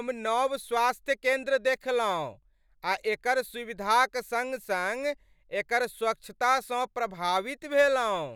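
Nothing stood out on listening to this speech recording.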